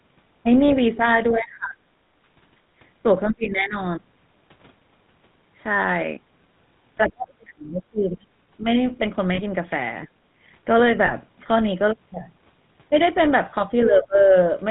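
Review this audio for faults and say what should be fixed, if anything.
A buzzy, gravelly roughness runs through the whole recording, and nothing is heard above 4 kHz. That sound points to the GSM full-rate codec at 13 kbps, which rebuilds the vocal tract from a sparse pulse excitation and discards the upper band. Avoid it by carrying the call over a wideband codec such as AMR-WB or Opus.

Lost GSM frames are heard as brief metallic rings at 0.68, 9.34–9.41 and 11.06–11.12 s. The decoder repeats the last good frame to cover the gap, with the level falling from the second lost frame on, which fits a single 20 ms frame at the first and third points and about 40 ms at the middle one. Reduce them with stronger radio coverage or channel coding, or switch to a codec with better loss concealment.

The speech dips and thins out in pieces at 1.31–1.88, 3.29–3.76, 7.08–8.23 and 13.85–14.34 s, falling by roughly 20 to 35 dB, with the deepest drop near 7–8 s. 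This is likely speech suppressed in double talk, where the echo canceller turned down this talker while the far side spoke at the same time. Prevent it by tuning the canceller's double-talk detection so that near-end speech is held through overlaps.

The room background drops by about 11 dB between 10.07 and 10.30 s, then comes back. This is background gated by the echo canceller, which pulled the microphone down hard while the loudspeaker played. Lower the canceller's residual-echo suppression depth or add comfort noise so the background stays steady.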